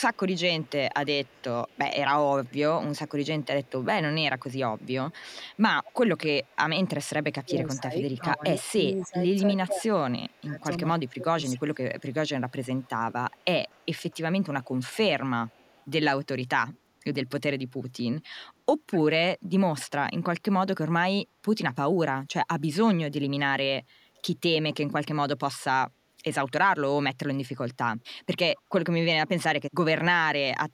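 From 0 to 6.88 s there's a faint echo leak, a copy of the voice about 35 dB down trailing by 244 ms. The likely cause is a speakerphone whose echo canceller isn't removing everything its mic picks up. Between 7.42 and 11.8 s the speech is suppressed in double talk, dipping by up to roughly 15 dB for about three seconds in total. That's likely the canceller ducking the talker because it can't separate them from the echo. Inside that stretch, at 8.12 to 9.07 s, the echo comes back stronger, around 25 dB down and again 244 ms behind, likely from the same leaky canceller. It fades back to about 35 dB down from 10.29 to 15.85 s, likely for the same reason. The loudest leak, only about 20 dB below the voice, runs from 18.23 to 19.84 s and is likely the same canceller failing. There's one last short scrap at 28.56 to 28.61 s, again around 35 dB down at 244 ms, likely with the same cause.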